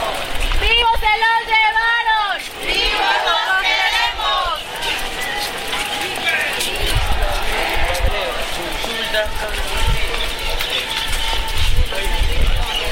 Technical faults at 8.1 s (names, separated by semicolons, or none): dropped buffer (overrun)